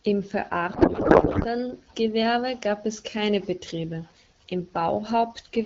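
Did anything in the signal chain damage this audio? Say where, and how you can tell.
Yes, at the codec stage. From 0.73 to 1.46 s the speech gives way to garbled noise and warble that barely tracks it. This is a codec payload misread. The AMR-WB frames are unpacked with fields in the wrong places, which fits octet-aligned payloads being read as bandwidth-efficient.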